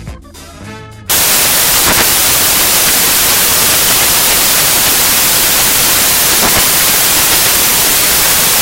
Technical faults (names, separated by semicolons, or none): samples built from the wrong bytes